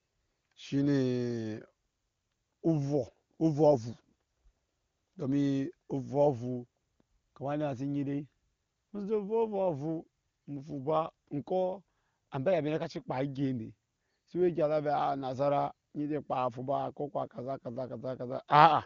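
No technical faults can be heard in the speech. It carries the narrowed band of AMR wideband (HD Voice) coding, and with any coding damage at most faint, the sound fits one of the codec's top rates, around 23.85 kbit/s.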